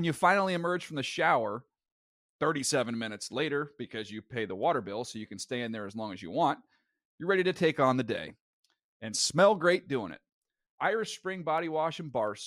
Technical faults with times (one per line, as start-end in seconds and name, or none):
0.16-12.43 clock slip clicks